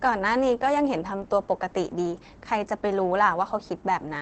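Opus voice compression runs through the whole speech clip, and the damage is plainly audible. The coder appears to be working in its SILK linear-prediction mode at wideband, which fits a bitrate around 12 kbps. The excitation is coded coarsely, so the speech sounds muffled, hoarse and faintly robotic. On a spectrogram, energy stops sharply at about 8.8 kHz, and harmonics look smeared in blocks consistent with 20 ms frames.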